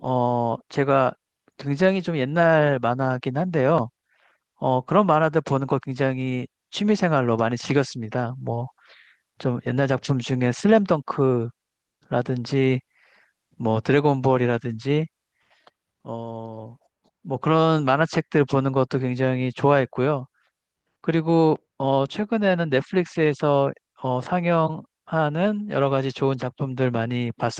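Nothing to flag here: it's a speech recording, and there's no technical fault to point to anywhere in it.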